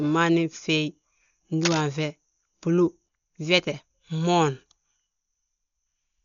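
From the start the speech sounds dull and smeared, with nothing above about 6.9 kHz and a rough, fluttery noise clinging to voiced sounds. That's heavy codec damage, likely from Dolby Digital compression at a bitrate around 48 kbps, where many frequency lines are filled with dither noise instead of real detail.

At 1.62 to 1.81 s there's a burst of dense, uneven scratching, only a little quieter than the speech itself. That's cable scratch noise, likely a worn cable or connector being moved and its contact resistance jumping around for that moment.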